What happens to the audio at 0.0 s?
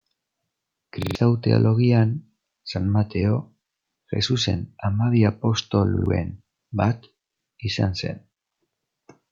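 At 0.0 s the speech starts cleanly, with no dropout, click, distortion or other fault.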